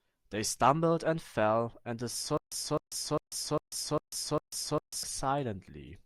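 From 2.37 s to 5.03 s the speech breaks into a stutter with silent gaps. A 257 ms fragment plays, then about 144 ms of digital silence follows, and the cycle repeats every 401 ms, six times in all, at a steady mechanical pace. The likely cause is a stalled player or stream that replayed its last buffered piece on each retry before running dry, so the audio due in that stretch never arrives.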